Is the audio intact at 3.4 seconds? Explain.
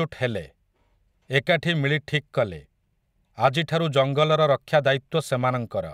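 Yes, the speech at 3.4 seconds is intact, with no dropout, click, distortion or other fault at that moment.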